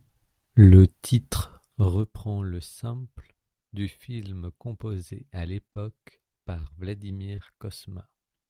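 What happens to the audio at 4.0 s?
At 4.0 s the speech runs on intact, with no dropout, glitch or fault of any kind at that moment.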